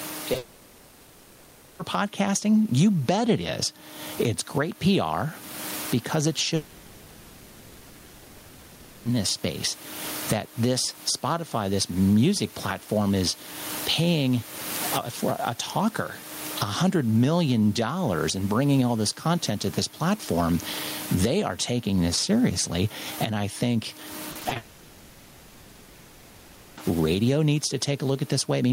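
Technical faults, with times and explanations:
Throughout, gain pumping: the gain swings by about 20 dB, so loud and quiet passages sit unnaturally close together and the sound feels squashed. The likely cause is input gain set far too high, with a fast limiter or compressor pulling it back down on each loud moment. This differs from the steady room noise, which stays about 31 dB below the speech. That noise is simply part of the recording.
0.33 to 0.37 s, short concealed packet loss: about 20 ms of audio never arrived, and the gap was patched by extending the sound just before it, then blending back into real audio. It comes across as a brief smear right at the start. Unlike the dropouts, it is over almost instantly and real audio returns at once. Here, though, it runs straight into the first long dropout.
0.37 to 1.81 s, 6.55 to 9.07 s and 24.57 to 26.79 s, long network dropout: for about 1.4 s, 2.5 s and 2.2 s the original audio is missing, replaced by a continuation of the last sound that turns into a fading buzz or hiss. 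There is no clean silence. When the audio resumes, it picks up later, with that stretch simply gone, likely because nothing reached the receiver for that whole time. The length sets these apart from the brief patches.
24.31 to 24.57 s, repeated packet loss (robotic sound): five separate holes, the longest 40 ms, each filled by extending the previous sound, cover close to half of this quarter second. The rapid alternation of real and patched audio gives a choppy, robotic texture with fragments missing. Unlike a single dropout, real audio keeps flickering through between the patches. Right after this stretch, the third long dropout takes over.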